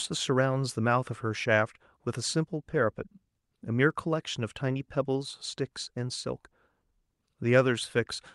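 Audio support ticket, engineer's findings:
No faults found in the speech audio. Call path audible and working: Opus-type coding texture, top end cut at about 12 kHz, consistent with a mid-rate Opus setting around 48 kbps.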